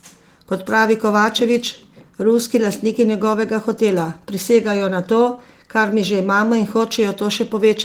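The speech recording carries no audible technical fault, and the full audio band is present, as expected from Opus voice compression in its hybrid mode.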